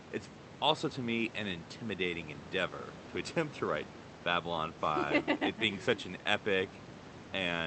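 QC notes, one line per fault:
No fault to note.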